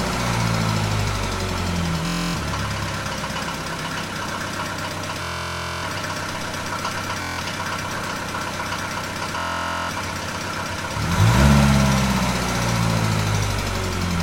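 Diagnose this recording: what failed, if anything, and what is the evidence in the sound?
Bluetooth stutter in the wireless link: lost packets made the receiver replay its last buffer at 2.07–2.36, 5.23–5.84, 7.22–7.40 and 9.38–9.91 s. These show as identical repeating waveform blocks before the sound jumps ahead.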